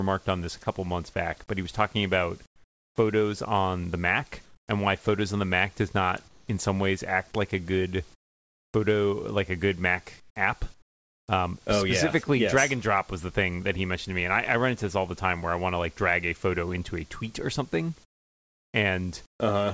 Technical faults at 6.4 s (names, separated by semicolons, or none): comfort noise in place of the background